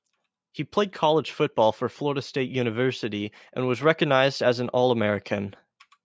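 Speech recorded through a call's microphone processing, with the lowest bass removed by its high-pass filter and nothing above 8 kHz as expected for that path, shows no technical faults.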